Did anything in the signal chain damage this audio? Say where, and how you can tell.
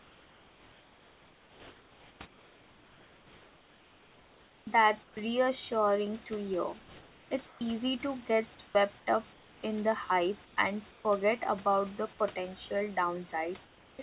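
Yes. Comfort noise in place of the background, from call processing: at 0–4.67 s, 5.03–5.17 s (before "reassuring to hear"), 6.79–11.05 s (after it) and 13.65–13.99 s, the real room background becomes steady, featureless hiss, about 3 to 6 dB quieter in all but the 6.79 s span. A noise gate would leave silence; here the gaps are filled, likely by synthesised noise during discontinuous transmission.

Onset clipped by the voice detector, also in call processing: at 13.97 s the sound starts abruptly, its first 20 ms missing and its soft beginning gone. Unlike a network dropout, there is no hole; comfort noise runs straight into the sound, likely because the detector reacted late.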